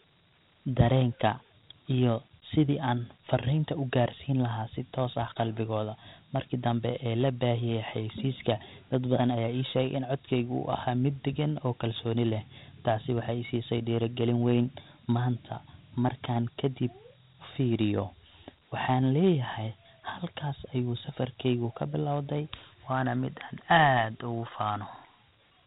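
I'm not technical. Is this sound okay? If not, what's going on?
No. The whole recording has Dialogic VOX ADPCM damage, an old phone-system format. It sounds muffled, with nothing above about 3.8 kHz, and a gritty hiss rises and falls with the speech instead of staying steady.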